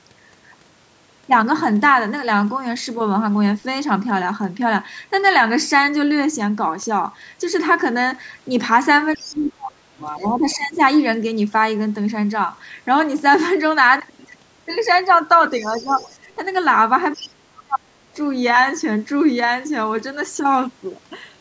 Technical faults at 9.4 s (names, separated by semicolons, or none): other side's voice leaking through; speech suppressed in double talk